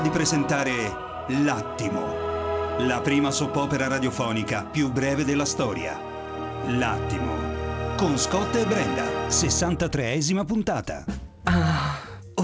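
No technical faults are audible.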